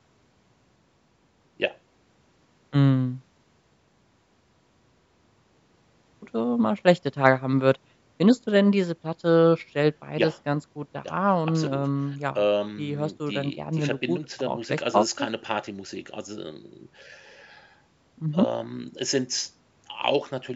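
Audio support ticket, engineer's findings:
No faults found; call microphone processing working as expected.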